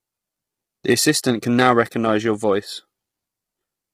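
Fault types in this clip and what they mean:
Low-delay AAC compression: the speech has likely passed through a low-delay AAC coder of the kind used on video calls, coding about 500 frequency lines a frame with a low-delay window and starved of bits, which fits a rate around 24 kbps. The damage is heavy and runs the whole clip: the speech sounds rough and grainy, noise fills the gaps between harmonics, and the top band comes across dulled or synthetic.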